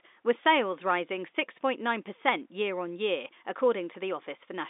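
Telephone-band speech carried over G.711 mu-law coding, with the line band spanning 250 Hz to 3.7 kHz and nothing above 3.8 kHz, and no technical fault can be heard in it.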